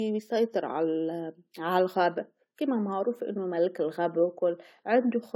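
Speech with generation loss throughout: a swirly, hollow smear and blurred consonant attacks, with nothing above 17.9 kHz. That is more damage than one pass at a rate like 64 kbit/s AAC would cause, so repeated re-encoding, perhaps around seven passes, is the likely cause.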